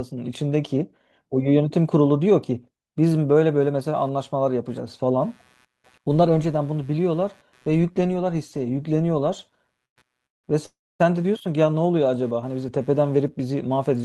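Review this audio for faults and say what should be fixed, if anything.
A faint buzz pulsing about 150 times a second, about 40 dB below the speech, runs from 3.6 s to the end. This is computer activity noise: processor, graphics or mouse load disturbing the audio circuit's shared ground. Moving to an external USB audio interface or adding a ground-loop isolator would keep the computer's load off the audio path.

Three short halts into silence occur at 9.85–9.98 s, 10.26–10.46 s and 10.66–11.01 s, adding about 0.11, 0.17 and 0.34 s. The speech then resumes intact. These are call audio freezes, likely from delayed packets emptying the jitter buffer. A steadier network connection and a deeper jitter buffer would keep the buffer from running dry.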